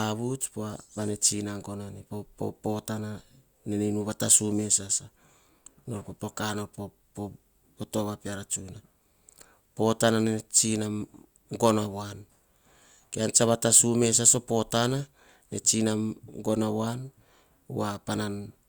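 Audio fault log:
No faults can be heard in this speech recording. Nothing in it calls for an entry in the log.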